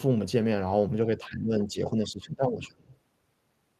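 Speech suppressed in double talk runs from 1.17 to 2.88 s in this speech recording: the level sinks by around 15 dB at its deepest, and about a second and a half of that stretch is held down. An echo canceller likely mistook overlapping talk for loudspeaker echo and attenuated everything.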